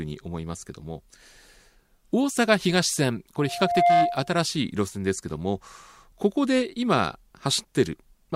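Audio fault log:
3.37–4.39 s: loudspeaker feedback squeal. A single steady tone near 699 Hz swells out of the speech over about half a second and settles roughly 10 dB above it. The microphone is picking up its own loudspeaker, and at that one frequency the loop gain passes unity, so the tone keeps reinforcing itself. On a spectrogram it is a bright horizontal line at 699 Hz. The waveform's envelope grows sharply, then holds high until the loop is broken.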